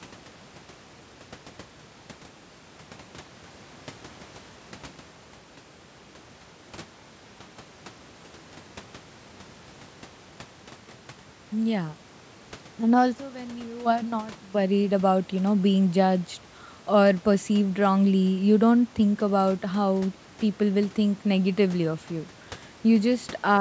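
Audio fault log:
No fault to log.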